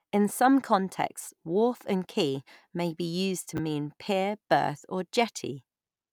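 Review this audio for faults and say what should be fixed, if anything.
At 3.57 to 3.59 s, between "used to" and "mean pier berth or", there is a brief jumbled moment. These are chunks out of order. A 10 ms chunk played one chunk late, after the chunk that should follow it. That swap creates three hard joins. To prevent it, sequence-number each chunk and reorder in the buffer before playback or writing.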